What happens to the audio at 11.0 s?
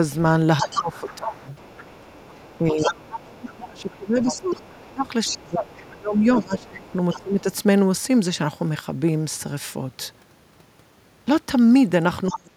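Nothing goes wrong at 11.0 s; the speech there plays through intact, with no dropout, click, distortion or other fault.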